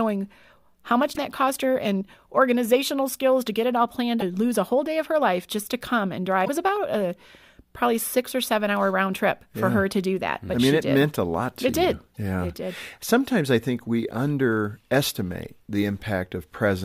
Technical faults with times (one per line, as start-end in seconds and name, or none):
0.13-16.83 clock slip clicks
1.11-1.18 damaged data in a compressed stream
4.17-4.22 damaged data in a compressed stream
6.41-6.49 damaged data in a compressed stream
12.11-12.18 damaged data in a compressed stream